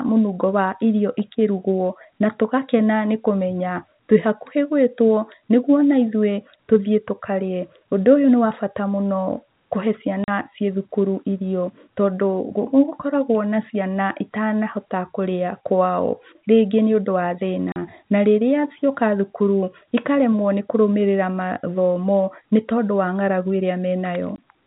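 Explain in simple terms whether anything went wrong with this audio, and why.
Yes, two things went wrong. The first is packet loss filled with silence. The sound drops out three times: at 10.24 s just before "ciĩthukuru irio tondũ", at 17.72 s just before "na rĩrĩa", and at 24.36 s. The gaps last 40, 40 and 20 ms, which fits 20 ms packets going missing. Each hole starts and stops abruptly.

The second is Wi-Fi interference. From 18.68 s to 21.42 s, right after "na rĩrĩa", a faint, steady ticking runs about ten times a second. A nearby Wi-Fi radio sends a signal every 102.4 ms, and the audio circuit picks it up as sound.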